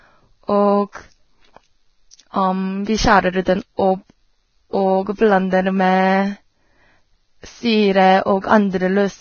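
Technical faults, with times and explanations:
Throughout: Vorbis compression. The sound is hissy and grainy across the whole clip. Nothing is heard above 6.6 kHz, so the treble is dull and closed in. Fine high detail has turned into rough noise of similar loudness. Tones sound coarse and attacks are blurred. The damage is heavy and points to a very low bitrate, somewhere near 18 kbps. The likely cause is a Vorbis encoder at low quality settings.
0.92–0.95 s, 3.42–3.46 s, 3.77–3.79 s: pre-echo. A short hiss is heard just before a sharp onset, and the onset itself sounds softened. The smear lasts about 26 ms, 48 ms and 20 ms. The codec spreads its coding noise across a whole block. When a sudden attack falls late in that block, noise sized for the loud attack also fills the quiet moment before it.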